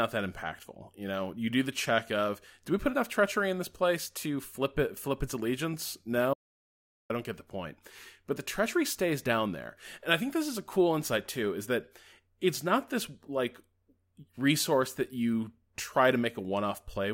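The input feed to this speech recording was most likely interrupted for a moment while the recorder kept writing, producing an audio dropout to silence from 6.34 to 7.10 s. The speech cuts off abruptly mid-flow and resumes just as suddenly, and the gap in between is silent with no room tone at all. About 0.76 s of the speech is simply missing and cannot be heard.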